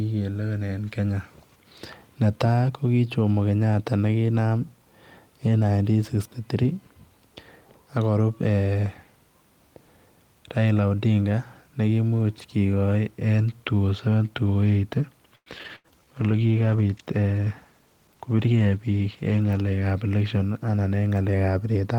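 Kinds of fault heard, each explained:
Repeated packet loss (robotic sound): From 15.35 to 15.87 s, four gaps of lost or late packets were patched by stretching the preceding sound. About 40 percent of that span is concealed, the longest hole 109 ms. The speech turns choppy, with pieces missing.
Call bitrate drop: At 15.68 s the encoder's rate falls from 32 to 16 kbps. It stays there for about 4.2 s, until 19.93 s. Coarser coding at the lower rate makes the speech rougher and duller, with a watery edge.
Jitter buffer slow-down: Between 15.86 and 16.24 s the receiver repeats tiny pitch-period slices to rebuild its reserve. This adds 63 ms. Speech plays at 85 percent speed with unchanged pitch, so syllables sound drawn out.
Jitter buffer speed-up: From 17.39 to 18.41 s the receiver trims short pitch-period pieces to shed excess delay. Roughly a tenth of a second is removed. Speech runs about 10 percent fast at the same pitch and sounds hurried.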